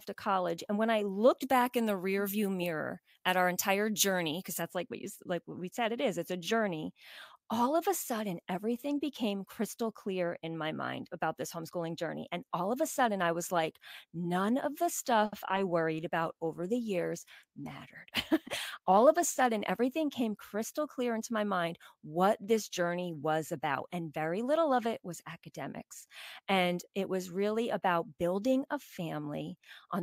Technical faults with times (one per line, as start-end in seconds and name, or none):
1.42-4.62 pre-emphasis left on
15.25-15.34 short stall from a late packet
15.96-19.52 call bitrate drop
18.07-19.04 jitter buffer speed-up